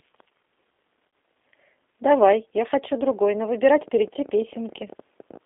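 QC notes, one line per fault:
Throughout: G.729 codec. The speech sits in a narrow line band from 250 Hz to 3.5 kHz with nothing above, and sounds plainly rough and synthetic. That fits an 8 kbit/s coder rebuilding each 10 ms frame from a vocal tract filter, pitch predictor and a few pulses.
1.08 to 1.13 s: VoIP packet loss concealed by the speech codec. About 50 ms of audio goes missing. The decoder fills the gap by extending its last pitch and filter at falling gain, so the sound smears into a brief buzzy tone or coloured noise that fades. It stays weak or distorted just afterwards while the frame-to-frame state recovers.
3.64 to 5.38 s: train of clicks. Roughly twenty similar sharp ticks arrive at an irregular pace, averaging about 13 per second and peaking at about the level of the speech. They fall in pauses too, so they sit on top of the signal. The likely cause is interference or a faulty connection or power supply injecting repeated pulses.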